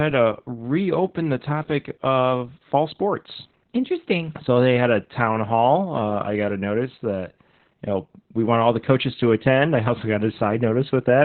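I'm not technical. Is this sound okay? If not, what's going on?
No. Opus voice compression runs through the whole clip. To save data, the speech was squeezed hard: everything above about 4.3 kHz is cut off, and the voice's raw sound is coded roughly, so it comes out muffled, hoarse and a bit robotic, like an old phone line.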